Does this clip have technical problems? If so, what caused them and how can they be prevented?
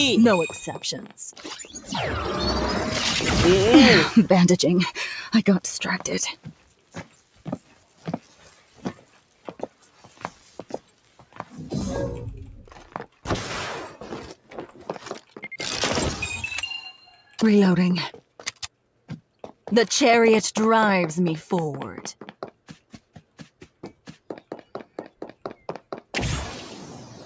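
Yes. A speech-tuned noise suppressor was left running on sound for the whole clip, with the level swinging by roughly 10 dB. It treats steady tones, ambience and decaying tails as noise and pulls them down while attacks pass, so the audio pumps and thins. Switch off the call's noise suppression, or use a music mode, when sending anything other than speech.

Sound cut by the noise suppressor occurs at 1.0–1.82 s, 6.33–11.45 s, 12.67–13.25 s, 14.35–15.39 s, 17.01–17.39 s, 18.14–19.54 s and 22.21–25.85 s. In these passages sustained or fading material sinks by about 10 to 12 dB and its decay is clipped short, for longest in the 6.33–11.45 s stretch. Disabling the suppressor prevents these drops.

The call microphone processing limits the band to nothing above 8 kHz, which is expected for this path and not a fault.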